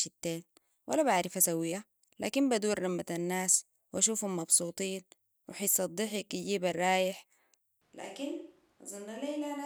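At 7.81 s, right after "وحسة ضحك يجيب الرايح", the speech abruptly turns hollow and roomy, about 10 dB quieter, with thinner bass and room noise roughly 35 dB below it, until the end. This is likely a switch to a distant microphone. The waveform shrinks, and the spectrogram shows weaker lows, smeared reverb tails and a raised noise floor.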